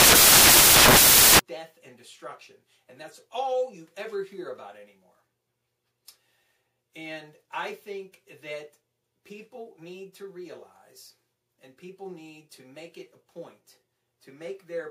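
From 0.0 to 1.39 s, samples built from the wrong bytes turn the audio into loud, harsh broadband noise: each sample's bytes are misordered or misaligned, so fast-changing low bits dominate every value.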